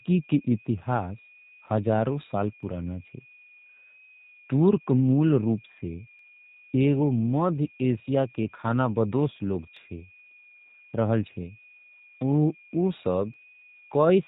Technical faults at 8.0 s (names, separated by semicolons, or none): switching supply whistle; G.729 codec; clock drift buffer slips